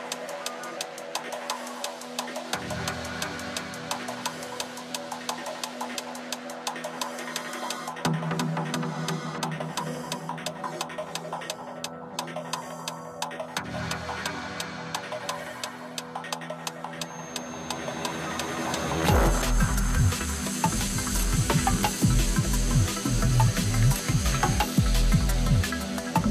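A feedback whistle runs from 16.98 to 24.69 s: a thin, steady 6.4 kHz tone sitting roughly 20 dB below the sound and swelling and fading slowly in level, likely from a loudspeaker-to-microphone loop held just short of runaway, unlike fixed electrical interference, which stays perfectly constant.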